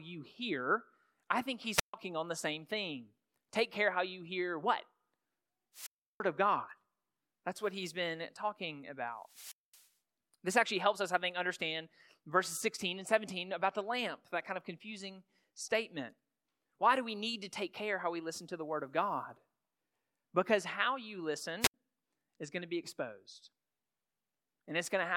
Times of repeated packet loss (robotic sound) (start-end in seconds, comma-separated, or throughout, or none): none